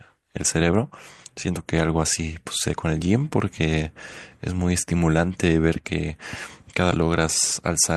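Right near the end, around 6.91 to 6.96 s, the speech jumps forward abruptly with a short blip at the join. That's likely a stream segment skipped: one chunk of the stream failed to load, so the player dropped it and carried on with the next.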